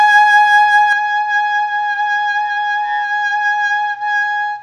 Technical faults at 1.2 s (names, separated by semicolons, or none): input switched to a poorer device